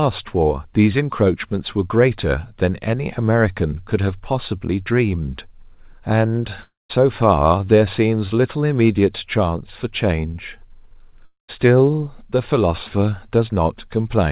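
At 6.62–6.91 s and 11.25–11.50 s, a long network dropout is the likely cause: a fading buzz turns to silence, then the speech resumes with 0.28 s and 0.24 s lost rather than merely paused.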